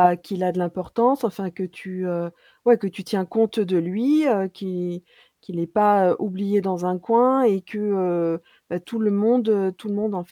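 From 0.15 s to 10.30 s, faint regular ticks run through the speech, roughly every fifth of a second. These are clock slip clicks. Each fits one sample dropped or repeated. The likely cause is two unsynchronised clocks differing by about 100 ppm.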